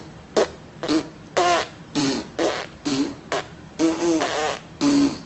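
No technical faults can be heard in the audio; it carries the ordinary sound of a WebRTC call path running Opus, with content above about 8 kHz cut off.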